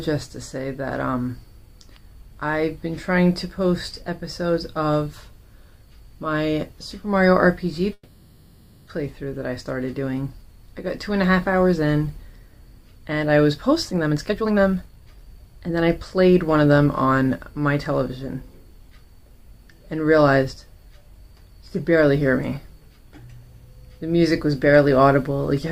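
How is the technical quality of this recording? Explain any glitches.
The recording has two noticeable glitches.

From 7.93 to 8.90 s there is a call audio freeze. The last sound drones and fades, likely because delayed packets emptied the jitter buffer.

From 13.74 to 17.22 s, a jitter buffer speed-up trims repeated pitch-period slices to shed delay. The sound hurries at 127% speed with unchanged pitch.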